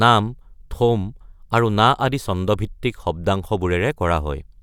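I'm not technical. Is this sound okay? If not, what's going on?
Yes, nothing wrong is audible in this speech recording, so there's nothing to fix.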